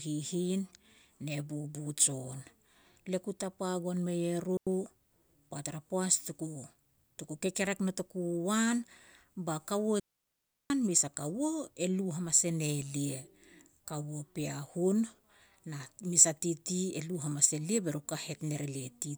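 At 4.57 s the speech drops into a clean, near-silent gap of about 97 ms, then again from 10.00 to 10.70 s, between "ba kaua" and "mes a". Both are digital wireless dropouts: the receiver lost too much data and muted with a quick fade, leaving no noise burst on either side.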